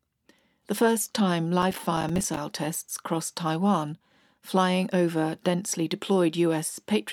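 Processor overload crackle runs from 1.62 to 2.37 s, about three quarters of a second of gritty tearing laid over the speech. The processor could not fill its short audio buffers in time, and around twenty deadlines were missed across that stretch. Each miss dropped in a silent gap only a few milliseconds long, which fits buffers of roughly 5 ms, with hard edges on either side. Packed this closely, the clicks merge into a rough crackle that stops once the load passes.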